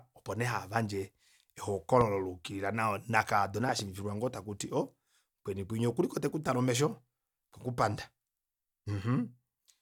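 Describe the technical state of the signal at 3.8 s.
A loud pop spans 3.69 to 3.82 s. A sudden voltage pulse, likely from a plug, switch or static discharge, entered the signal path and was shaped by the circuits after it. It is heard as two sharp pops standing well above the speech, which carries on underneath.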